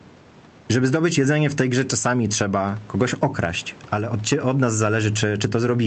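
Speech, with gain pumping throughout: loud and soft parts are squashed closer in level, with the gain swinging around 10 dB, likely from excessive microphone gain hitting a fast limiter.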